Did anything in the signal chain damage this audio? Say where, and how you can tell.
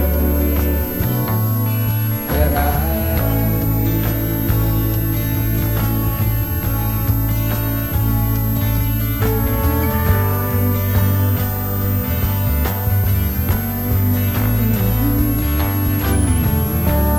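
Yes. A switching supply whistle runs throughout, a high tone wandering between about 10.7 and 13.8 kHz, roughly 10 dB below the signal. This is an analogue-stage fault: a power supply's switching frequency, dropping into audible range under shifting load, leaking into the audio.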